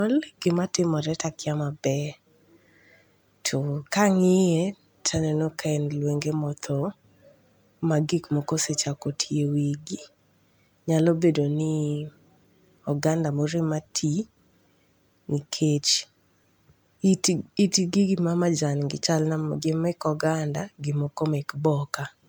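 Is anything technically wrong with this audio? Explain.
Yes. Generation loss throughout: the speech sounds swirly, hollow and smeared with blurred attacks, likely from repeated MP3 re-encoding, around seven passes at roughly 128 kbit/s, content reaching 20.1 kHz.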